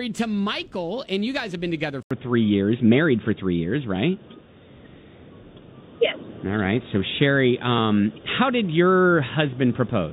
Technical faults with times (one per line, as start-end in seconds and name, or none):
2.03-10.13 input switched to a poorer device